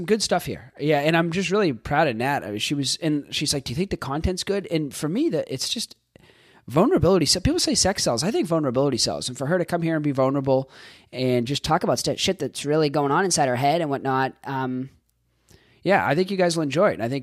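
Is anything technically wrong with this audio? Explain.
Yes. From 11.67 to 14.94 s there is a wrong sample rate fault: the samples are clocked out faster than they were captured, with no conversion in between. The ratio fits 44.1 kHz material played at 48 kHz. Because nothing resamples the audio, speed and pitch rise together. The speech runs about 1.09 times too fast and sits roughly 1.47 semitones sharp, so the voice sounds higher and hurried for that stretch before returning to normal.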